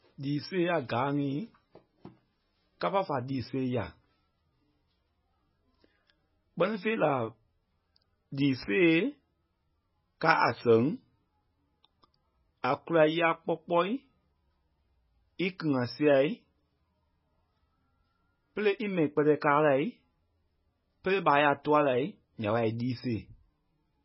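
The encoder likely ran very short of bits, which fits MP3 compression at around 16 kbps, and the damage is heavy from start to finish. With so little to spend, it discards the treble outright, leaving nothing above 5.5 kHz, and zeroes the weaker frequency lines, which flicker in and out between frames. The speech therefore sounds dull and watery, with a swirling, metallic chirp on s sounds and smeared attacks.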